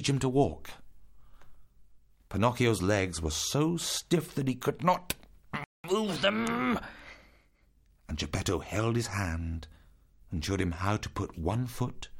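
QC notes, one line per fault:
5.64–5.84 s, playback stall: the sound drops to silence for about 200 ms mid-flow, then resumes where it left off, likely because the player ran short of buffered data. On the waveform and spectrogram this shows as a flat, empty gap with abrupt edges.
5.84–7.86 s, catch-up at higher speed: right after the gap the audio runs 1.1 times fast, raising pitch by roughly a semitone and a half while the backlog is drained, then settles back. A spectrogram shows harmonics shifted upward across this stretch.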